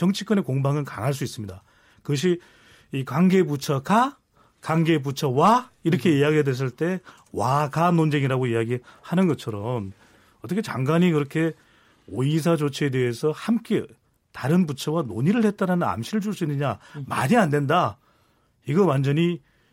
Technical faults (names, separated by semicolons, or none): Bluetooth SBC bit pool drop